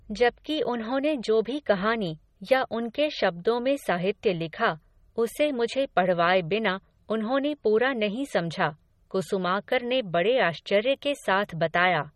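MP3 compression damage runs throughout the speech and is plainly audible, likely from a low-bitrate encode, which fits about 32 kbps. Short of bits, the encoder removed everything above 15.3 kHz and dropped weaker frequency detail, leaving the speech sounding watery and smeared.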